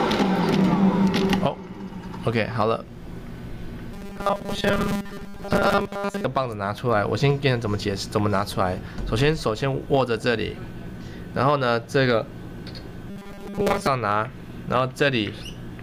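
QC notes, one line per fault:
3.93 to 6.24 s, robotic sound from repeated short buffers: new audio likely arrived too seldom, so 5 ms chunks were looped over most of the stretch, imposing a rigid, metallic 200 Hz buzz.
13.10 to 13.88 s, robotic sound from repeated short buffers: the same likely starved input, with 5 ms repeats filling most of the span, again leaving a fixed 200 Hz metallic buzz.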